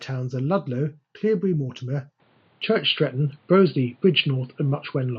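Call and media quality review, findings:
Speech turns dull and boxy from 2.2 s to end; nothing above 4.7 kHz. Switch is seamless, with no gap. Level shifts by a few dB, with a faint new noise floor well below the speech. Likely cause: input switched to a poorer device mid-call. Unlike a codec bandwidth step-down, the tone colour, level and background noise all change together at one instant, which points to a different microphone path rather than encoding.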